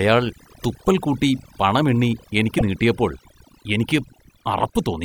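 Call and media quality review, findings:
Overdone noise removal, throughout: background drops and breaks up into twinkling specks. Denoiser set too aggressive, gating individual frequency bands near its noise estimate and taking low-level speech components down with them.

Broken MP3 bit reservoir, 0.62–0.64 s and 2.58–2.62 s (second just after "കൂട്ടി പണം എണ്ണി"): audio skips forward with a brief glitch. Likely cause is dropped 26.1 ms frames, so the following frame reads reservoir bytes from the wrong frame.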